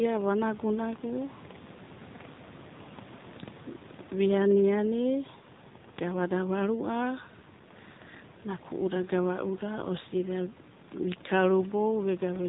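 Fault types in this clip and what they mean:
AMR narrowband mobile codec: The speech has passed through the AMR-NB mobile codec at 7.4 kbps. It works at 8 kHz sampling, so nothing above 4 kHz survives. Each 20 ms frame is rebuilt from a vocal-tract model driven by a few pulses. At this low bitrate the damage is plainly audible as a buzzy, synthetic quality in the voice. A simple low-pass filter would only dull the top, while this codec changes the texture of the voice itself.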